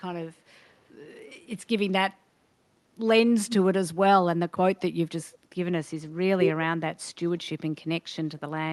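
A speech recording carried over a call link, with the top end stopping near 12 kHz as a call codec would leave it. Two echo leaks occur. From 0.66 to 0.86 s, a very faint delayed copy of the speech trails by about 167 ms. From 3.48 to 3.55 s, a shorter scrap returns about 170 ms late and much louder, roughly 10 dB below the speech. The likely cause is a far-end loudspeaker whose echo canceller let part of the signal back through.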